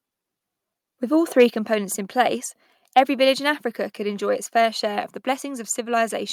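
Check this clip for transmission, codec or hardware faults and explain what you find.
Two related faults affect this speech clip, both just before "components in place".

Microphone overload occurs from 1.39 to 1.43 s. The peaks exceed the converter's ceiling by about 2 dB and their tops are flattened, roughly a twentieth of the samples in that span. That gives a brief harsh crackle, most likely from input gain set too high.

The microphone volume is stepped down at 1.5 s. The speech and background both drop by about 4 dB at once, right after the distorted peak. The likely cause is the call software reacting to that clipping by lowering the device's input level in a single step.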